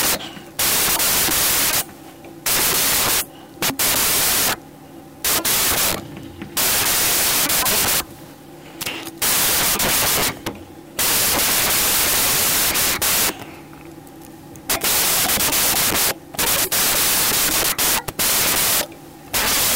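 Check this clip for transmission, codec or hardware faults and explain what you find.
A wrong sample width fault runs through the whole clip. The 16-bit audio is being read as packed 24-bit samples, so most values straddle two original samples. The speech sits buried in loud, harsh noise, shifted by a factor of 1.5 in speed and pitch.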